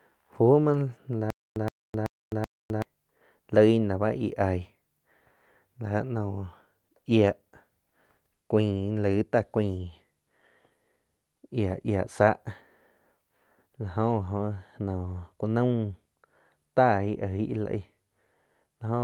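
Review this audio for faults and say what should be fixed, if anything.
Lost packets rebuilt from error correction occur at 0.63–0.65, 7.09–7.11, 8.77–8.79 and 11.69–11.75 s. Each short stretch sounds rougher and noisier because the decoder played a low-bitrate backup copy carried in the next packet instead of leaving a gap. The first three spans last 20 ms, which fits one lost packet each. The last lasts 40 ms, which points to two lost packets. On a spectrogram, each shows as a thin smeared slice. A steadier network path or a larger jitter buffer would stop these losses.

A stutter with silent gaps runs from 1.30 to 2.82 s. A 120 ms burst of speech repeats four times, every 380 ms, with 259 ms of digital silence between repeats. This likely comes from a stalled stream replaying its last fragment and then running empty. The waveform shows identical blocks separated by flat silent stretches, and the speech from that span is lost. 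More playback buffering, or a player that waits rather than replays, would prevent it.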